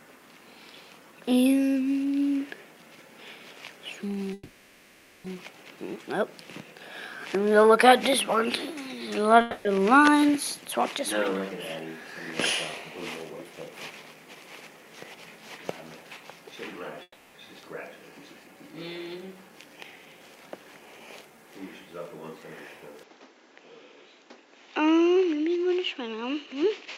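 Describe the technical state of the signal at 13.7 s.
At 13.7 s a jitter buffer speed-up runs from 13.44 to 13.91 s: pitch-period slices, roughly 70 ms in all, are trimmed, so audio hurries at 112% while pitch stays unchanged, unlike resampling.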